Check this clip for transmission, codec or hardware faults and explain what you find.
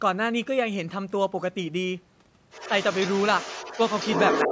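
Two call-path faults turn up in the last two seconds of this speech clip, both tied to echo cancellation.

Other side's voice leaking through, from 2.51 s to the end at 4.51 s: the far end is likely playing on a loudspeaker, and the echo canceller leaves a lot of it in the microphone signal. A second voice sits only about 5 dB under the talker.

Speech suppressed in double talk, from 4.45 s to 4.51 s: with both sides talking at once, the canceller likely can't split the talker from the echo and pulls both down. For a brief moment, well under a tenth of a second, the talker's level dips by roughly 15 dB.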